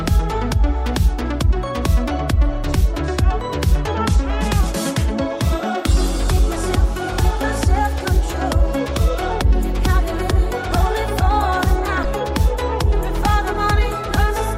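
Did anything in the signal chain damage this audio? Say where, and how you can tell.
Yes: damaged data in the compressed stream at the codec stage, 12.01 to 12.05 s. A brief blip as corrupted frames break decoder sync until it finds the next header.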